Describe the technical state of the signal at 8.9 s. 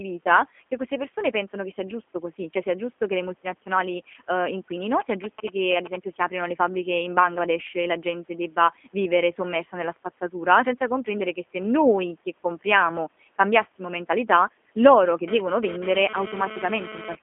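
At 8.9 s the speech is passing through the G.729 codec, as it does for the whole clip. Rather than sending the waveform, the coder rebuilds each 10 ms frame from a vocal-tract filter, a pitch predictor and a few pulses, which fits an 8 kbit/s G.729A stream. The line sits at 250 Hz to 3.4 kHz with nothing above 3.5 kHz, yet what separates it from a plain telephone band-limit is the clearly audible rough, synthetic buzz on top of the narrowing.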